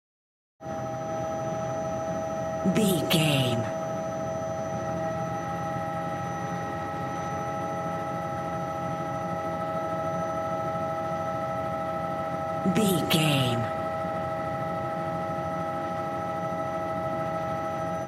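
No technical faults can be heard in this recording.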